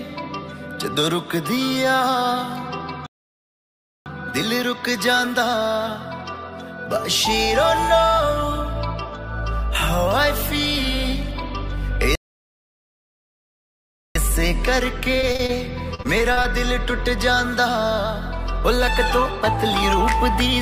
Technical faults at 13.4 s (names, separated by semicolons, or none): playback stall